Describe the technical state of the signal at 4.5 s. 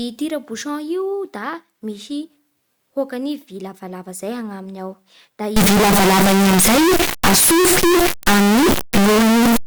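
At 4.5 s the speech signal is intact, with no dropout, clipping, glitch or other fault audible at that point.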